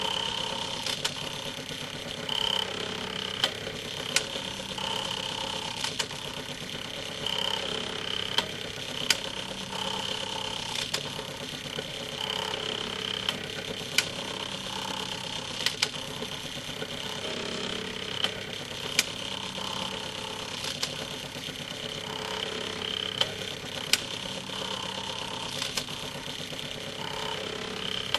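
No technical faults can be heard anywhere in this recording of sounds. Nothing in it needs a timestamp or an explanation.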